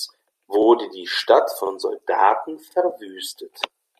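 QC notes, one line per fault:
0.63 s, 1.67 s and 2.71 s: overlapping chunks. At each of these joins a 44 ms slice of the sound plays twice, giving a short stutter. The processing works in one-second blocks, and each block starts 44 ms before the previous one ended. That is why the joins drift slightly later than whole seconds and why the same stumble recurs at a steady interval.
2.90 s: AAC frame loss with concealment. A brief smeared, noisy patch, about 10 ms long, comes just after the last chunk join. This fits a single missing frame on a low-delay AAC stream, likely AAC-ELD. The decoder rebuilt the gap from the preceding spectrum rather than leaving a hole, so there is no dropout, only a momentary blur before the signal resumes.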